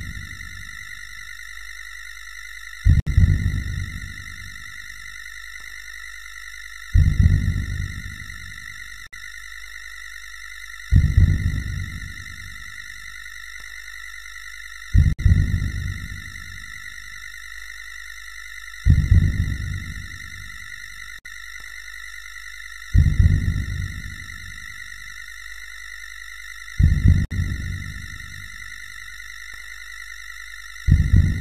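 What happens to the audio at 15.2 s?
A gap at a join of encoded pieces opens from 15.13 to 15.19 s, a gap of about 60 ms. Separately encoded pieces were joined untrimmed, so one run's padded final frame and the next run's start-up delay both remain. The sound stops with smeared edges and resumes where it left off. These joins recur every 6 s.

Overlap-add ripple runs through this moment too. Windowed frames were recombined with overlaps that don't sum to constant gain, so the level pulses by about 11 dB around 50 times a second, a fast, rough flutter.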